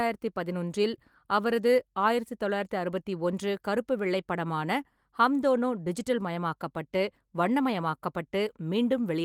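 Speech, no technical faults found; the Opus voice coding at work here leaves only light codec colouring, with the band reaching to about 20 kHz, which fits a fullband hybrid mode at around 24 kbps.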